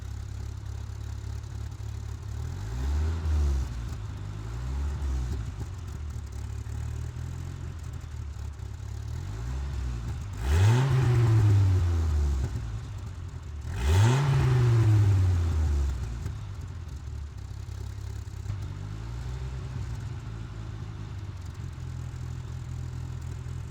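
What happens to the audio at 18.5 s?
A stream segment skipped at about 18.49 to 18.52 s: the sound jumps abruptly ahead with a brief blip at the join. The likely cause is one chunk of a segmented stream failing to load, so the player moved straight on to the next.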